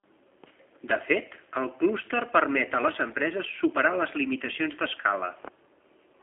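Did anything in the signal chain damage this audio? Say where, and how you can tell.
Yes. Across the whole clip the speech sounds slightly rough and synthetic, and there is no energy above about 3.6 kHz, sitting inside a telephone band of roughly 300 Hz to 3.4 kHz. That points to the codec stage, specifically G.729 coding, which fits an 8 kbit/s G.729A link. The codec models speech as a vocal tract filter plus a pitch predictor and a few coded pulses per frame, so what is heard is a rebuilt approximation rather than the original waveform.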